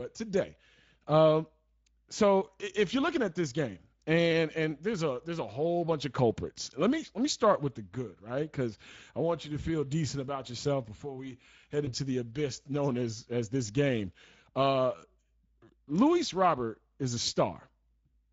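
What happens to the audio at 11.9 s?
Between "yourself before we head" and "the abyss known as", from 11.85 to 11.92 s, there is VoIP packet loss concealed by the speech codec. The gap fits a single lost 20 ms frame. The decoder repeated its last pitch and filter at falling gain, so a short buzzy, smeared stretch fades before the voice recovers. On a spectrogram the harmonics flatten into a frozen, repeated pattern. On the waveform the amplitude tapers across the patch.

The whole clip also carries plainly audible Speex codec damage at 16.8 kbps. Thin excitation makes the voice noisy and hoarse. A spectrogram shows blurred, grainy harmonics rather than clean striations, and the waveform looks rough between pitch pulses.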